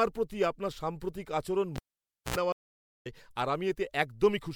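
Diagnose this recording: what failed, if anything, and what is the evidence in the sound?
Two separate failures here, one in the analogue wiring and one on the network side.

At 1.76 s there's a pop and the speech drops to near silence for about 553 ms: a cable pulled and plugged in with the line live. Just before it seats properly you get roughly 75 ms of 60 Hz mains buzz, which is the tip touching the jack before the sleeve makes ground. A second pop marks the return, and the signal is back by 2.36 s.

Then at 2.52 s the audio goes silent again for 528 ms, a classic stream reconnect. The player lost its connection, re-established it and spun up a fresh decoder mid-stream. When sound returns around 3.07 s it has jumped ahead by roughly half a second, so that stretch of speech is simply gone. That's what you'd expect from a live feed that keeps running while the client is away.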